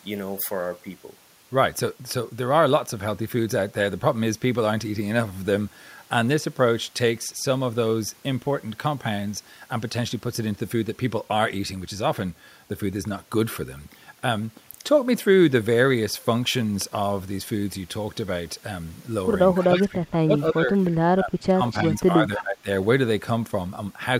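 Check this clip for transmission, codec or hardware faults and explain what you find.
Two faults cluster near the end of the speech, between about 19.6 and 22.7 s.

Speech suppressed in double talk, at 19.6 to 20.32, 20.5 to 20.78, 21.15 to 21.61 and 21.83 to 22.68 s: the echo canceller likely mistook overlapping talk for echo, dipping the voice by about 15 to 25 dB.

Echo leak, at 19.63 to 19.83 and 21.68 to 21.78 s: loudspeaker pickup likely slipped past the canceller, returning brief scraps delayed 0.3 s, about 20 dB under the speech.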